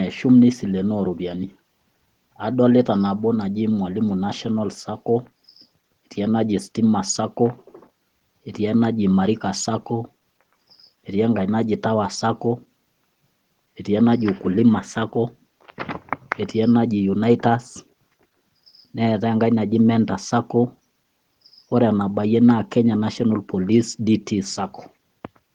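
Nothing stood out on listening to this speech recording.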